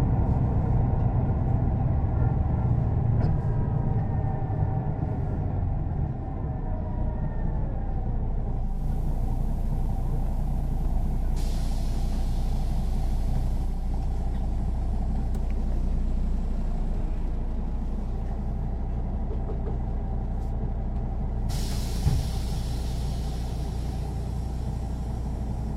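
At 8.59 s the sound cross-fades over about 0.3 s from the digital stream to the station's FM broadcast, a digital radio blending to analogue. The receiver lost its digital signal and fell back on FM. A steady hiss appears, some 35 dB below the programme, and level stays the same. Unlike an FM signal fading gradually, the hiss arrives and leaves with clean, quick blends, returning to digital at 13.92 s.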